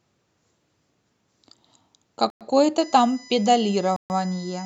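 At 2.30 s the speech cuts to dead silence for 107 ms and resumes at 2.41 s. This sounds like a Bluetooth stall. Interference likely delayed the wireless packets, so the headphone buffer emptied. Playback halted until the resent data arrived.

From 2.78 s to the end, a steady USB whine sits under the speech. Its pitch is fixed on a 1 kHz grid, and the 5 kHz harmonic is strongest. It sits roughly 25 dB below the speech. The bus draws current in 1 ms frames. That ripple leaks into the audio through shared power or ground.

At 3.96 s a second gap of 136 ms occurs, ending at 4.10 s. The speech drops out cleanly and picks up again. It is the same kind of Bluetooth stall, with the same likely cause: delayed packets left the buffer empty until retransmission caught up.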